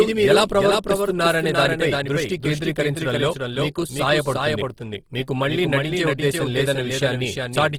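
Throughout this speech recording, a second full-band copy of the sound trails the original by roughly a third of a second, only a few dB quieter. It is most likely a doubled audio track, with the same signal mixed in twice. Unlike an echo or reverb, the repeat comes once, has no decay and carries no room colour. The whole clip also sounds rough and grainy rather than swirly, with the bandwidth still full. That texture is likely Opus compression in its music mode, and the plainly audible damage fits a low bitrate around 16 kbps. MP3 artefacts would instead leave spectral holes and a watery shimmer.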